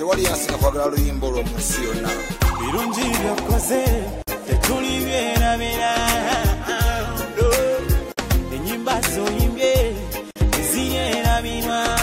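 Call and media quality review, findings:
Gap at a join of encoded pieces, three times: 4.22 s (52 ms), 8.12 s (56 ms), 10.31 s (51 ms). Silences with smeared edges. Sound resumes where it stopped. Separately encoded segments concatenated untrimmed; encoder start delay and last-frame padding retained.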